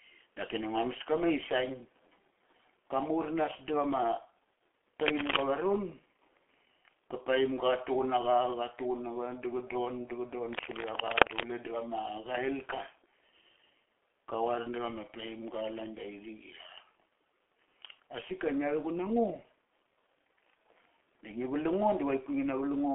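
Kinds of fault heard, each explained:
G.723.1 codec: throughout, this 6.3 kbit/s phone codec leaves speech muffled and hoarse, nothing above 3.6 kHz, consonants smeared by coarse frame-by-frame coding.
Cable scratch noise: at 5.05–5.46 s and 10.53–11.45 s, rough scratching bursts roughly as loud as the speech, likely a loose connector or cable shifting.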